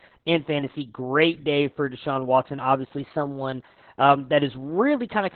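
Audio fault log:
Throughout: Opus voice compression. The encoder runs its SILK speech coder alone in narrowband, at a rate that fits about 8 kbps. Nothing above 4 kHz survives, and the excitation is coded very coarsely, so the speech comes out heavily muffled, hoarse and slightly robotic.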